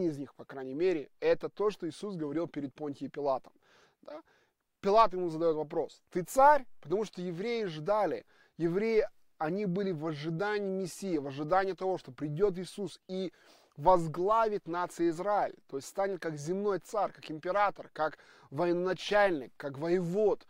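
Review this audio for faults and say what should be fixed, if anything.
No faults turned up in this audio, so nothing needs to be fixed.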